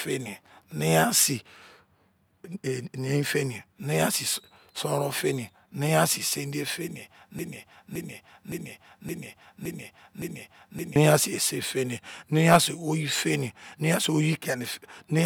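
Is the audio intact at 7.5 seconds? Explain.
No. A broken-record loop runs from 7.39 to 10.96 s, so 7.5 s falls inside it. A fragment about 0.57 s long plays back to back six times, identical each pass, and the speech that should have continued through those seconds never arrives. The likely cause is a player, encoder or stream that stalled and kept resending the last chunk it held until fresh audio resumed just before 11 s.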